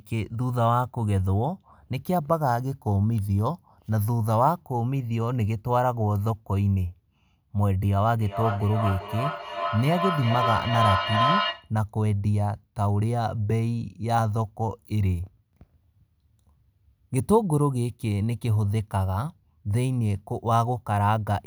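At 8.14 s a feedback howl starts and runs until 11.75 s. Two devices in the same room are joined on the call. Sound leaves one loudspeaker, reaches the other microphone and comes back louder each time. The repeats build rather than fade. They narrow to a ringing tone around 1 kHz that pulses roughly every 400 ms, the delay around the loop. At its peak the howl is about as loud as the speech.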